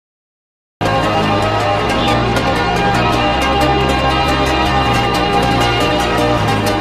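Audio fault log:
0.00–0.81 s, cut-off start: the clip opens on digital silence until 0.81 s, where sound appears abruptly already in progress, with no natural attack or fade-in leading up to it. Capture began after the sound source was already active, so whatever came before that point was never recorded. The level jumps from nothing straight to mid-event, and that instant step is heard as a hard, unnatural entry rather than a sound beginning on its own.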